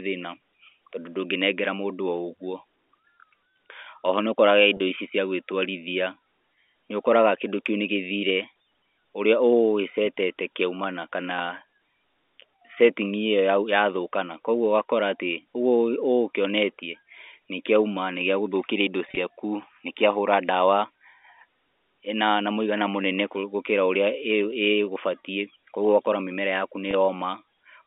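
At 4.77 s, just before "ici cia", about 30 ms of packet loss with pitch repetition (consistent with three lost 10 ms packets) leaves a brief held, buzzy moment where the receiver loops the last pitch period. Near 19.09 to 19.17 s, 60 ms is lost in runs up to 30 ms across 80 ms, giving short held, buzzy notes. At 26.91 to 26.93 s, a 20 ms gap produces a slightly held, buzzy note. On a spectrogram these appear as frozen harmonic stripes inside the 250 Hz to 3.6 kHz telephone band of the G.711 A-law line. In the waveform they show up as repeated, fading pitch cycles.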